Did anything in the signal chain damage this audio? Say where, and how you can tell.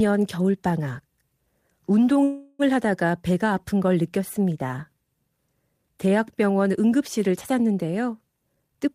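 Yes. Two faults come from the network and jitter-buffer stage of a call.

From 2.23 to 2.62 s there is a call audio freeze. The sound stops moving and the last fragment is stretched into a buzz or hiss that fades but never reaches silence. That fill lasts about 0.36 s. Afterwards the speech picks up exactly where it stopped, with nothing lost. Everything after it simply runs 0.36 s late. The likely cause is delayed packets leaving the jitter buffer empty.

From 8.51 s to the end at 8.94 s there is a jitter buffer speed-up. The speech suddenly sounds hurried, running at about 149% of normal speed while the pitch stays put. That points to the receiver cutting many short pitch-period slices in a row to drain a backlog. It removed roughly a fifth of a second, which fits packets arriving in a bunch after a delay.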